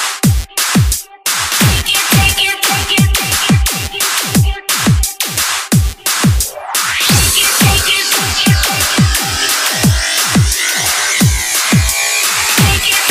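Nothing in the recording stood out as a technical problem on listening.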